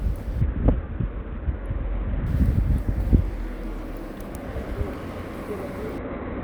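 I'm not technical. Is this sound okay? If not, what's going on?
No. Twice the sound turns dull and muffled, with a gritty, sandy hiss laid over it: from about 0.41 to 2.26 seconds, and again from 5.98 seconds to the end. This is a Bluetooth SBC bit pool drop. The wireless link got crowded, so the phone cut back on the detail it sends to keep the audio flowing. The highest sounds get dropped and the rest is stored roughly, which causes the dullness and grit until the link recovers.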